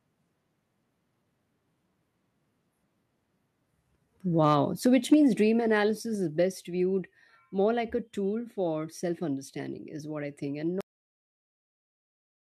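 From 4.43 to 4.55 s the loudest syllables take on a harsh, crackling edge: microphone overload, likely from input gain set so high that peaks pushed about 2 dB past the converter's limit. On the waveform a small share of the peaks sit flattened.

At 4.86 s the level of the speech and the background falls together by about 4 dB. This is a microphone volume stepped down, likely the call software cutting the device's input gain in one move after the distorted peak. The waveform's envelope narrows abruptly at that point.

At 5.12 s a second, shorter overload flattens a larger share of the samples, again about 2 dB over. At 5.14 s the input volume is stepped down once more, by about 2 dB.

At 10.81 s, right after "what I think and", the speech is chopped mid-sound. This cut-off end drops straight to digital silence with no decay, because the final buffers were never written. The spectrogram goes from full energy to blank in a hard vertical edge, and the waveform is flat through to the end.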